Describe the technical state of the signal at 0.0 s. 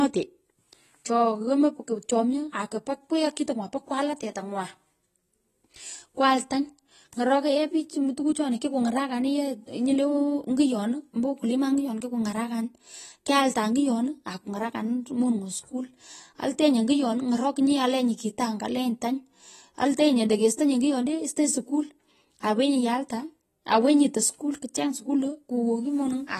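At 0.0 s the speech already carries AAC compression damage that runs through the entire clip. It most likely comes from AAC-LC coding at a low rate, which fits a bitrate around 32 kbps. The encoder quantises each frame's frequency lines coarsely and discards everything above 14.1 kHz. The speech therefore sounds dull and smeared, with a plainly audible warbling, fizzy texture on sibilants and sustained sounds.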